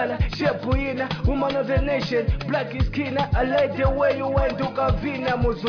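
No technical faults can be heard anywhere in this audio.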